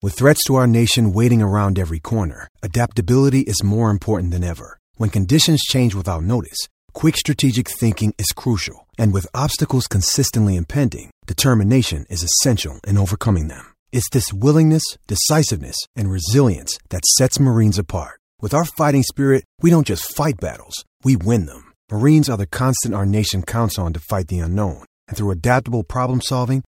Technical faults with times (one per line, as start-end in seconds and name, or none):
none